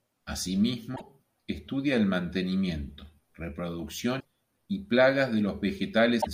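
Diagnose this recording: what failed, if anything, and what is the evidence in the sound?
Three short glitches break into the speech, at 0.93 to 1.01 s (just before "estudia el mantenimiento"), 4.17 to 4.25 s and 6.18 to 6.27 s, each under a tenth of a second. This is damaged data in a compressed stream, at the codec stage. Corrupted bytes made the decoder misread those frames, lose sync and hunt for the next valid frame header, producing a brief disruption in the output.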